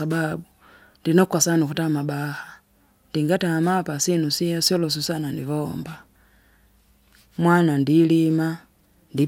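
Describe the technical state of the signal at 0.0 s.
At 0.0 s the speech signal is intact, with no audible technical fault.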